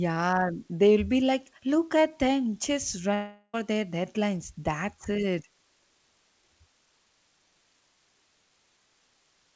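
It's a speech clip, and there is a constant, even hiss under everything, with no grit or distortion to it. That's low bit depth with dither: the audio sounds like it was reduced to about 9 bits, with dither added before rounding so the quantisation error turns into steady white noise rather than crunchy distortion. The noise sits roughly 40 dB below the speech and stays the same from start to finish. The second problem is around 3.14 to 3.55 s, where the speech gives way to a continuation of the last sound that fades over about 0.4 s. It never drops to actual silence. The speech then picks up again with that stretch simply gone, which points to a likely long network dropout: about 400 ms of audio never arrived, and the receiver papered over the gap by extending what it had. Throughout, there's nothing above 8 kHz, which fits the G.722 call codec it went through.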